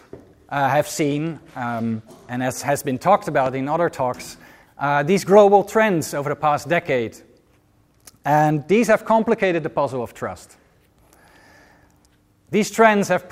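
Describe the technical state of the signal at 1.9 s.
At 1.9 s the signal sits inside a Bluetooth SBC bit pool drop running from 0.88 to 2.30 s. A congested link forced the encoder onto fewer bits, consistent with a bit pool falling from 31 to 16, near 110 kbps. The upper sub-bands are starved and the rest coarsely quantised, so treble dulls and gritty noise rises. On a spectrogram the top band thins or goes blank, with grainy speckle below, until the rate recovers.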